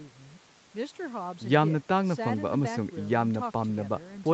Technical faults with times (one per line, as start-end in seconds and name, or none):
none